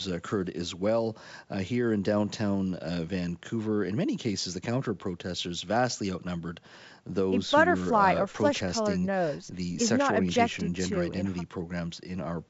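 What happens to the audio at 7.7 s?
Nothing goes wrong at 7.7 s: the audio is intact there, with the G.722 wideband telephone coding at 64 kbit/s leaving at most faint traces.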